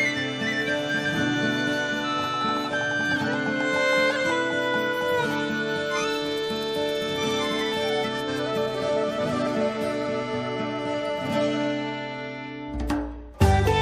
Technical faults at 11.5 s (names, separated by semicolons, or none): none